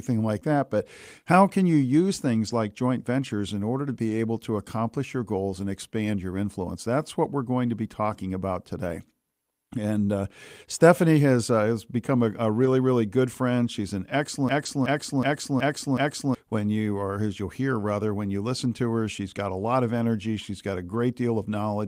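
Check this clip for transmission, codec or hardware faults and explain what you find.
Three kinds of fault are present in this speech: a single concealed dropout, five spots rebuilt from error-correction data, and one system hang loop.

Short concealed packet loss at 0.39–0.43 s: about 20 ms of audio arrived too late for the decoder. The receiver covered the hole for roughly 19 ms by extending the preceding sound, then crossfaded back into the real signal. It is heard as a brief smear or wobble.

Lost packet rebuilt from error correction at 2.47–2.53 s, 4.09–4.11 s, 12.61–12.67 s, 14.65–14.67 s and 20.93–20.99 s: each lost packet was replaced by the low-bitrate copy carried in the next one, rebuilding 20 or 40 ms at a time. There is no gap, but those moments sound rougher and noisier.

System hang loop from 14.49 to 16.35 s: the system froze while the audio hardware kept replaying its ring buffer. 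A 371.52 ms segment repeats five times at 2.69 Hz, which fits a 16384-sample buffer, giving a slow stutter that replaces about two seconds of audio.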